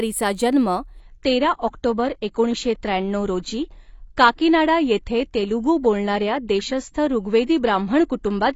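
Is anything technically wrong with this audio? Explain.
Yes, there's one problem. At 1.00 s the speech suddenly loses its top end, with nothing left above 7.5 kHz, and artefacts rise through to the end with no gap. That's an adaptive stream switching to a lower bitrate, consistent with AAC dropping from about 96 to 24 kbit/s.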